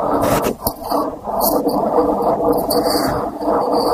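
From 0.99 s to the end, a resampler restarted on every block. Each 10 ms block converted from 48 kHz to 44.1 kHz separately, producing a 100 Hz buzz under the speech.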